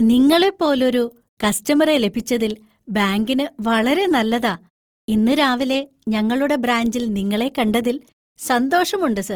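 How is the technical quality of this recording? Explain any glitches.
The recording is held back by audible codec damage across the whole clip.

Opus compression, throughout the speech: the likely cause is Opus in its CELT music mode at a low rate, consistent with about 24 kbps. Short of bits, the encoder fills bands with folded or noise-like content, so the sound turns grainy and rough, though the band stays full, reaching 20.3 kHz.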